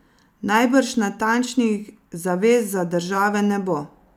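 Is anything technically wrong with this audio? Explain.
No, nothing technically wrong can be heard in this speech recording. There is no fault to explain.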